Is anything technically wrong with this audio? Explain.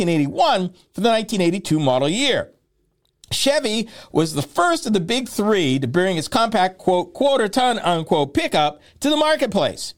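No, nothing technically wrong is audible anywhere in this speech recording.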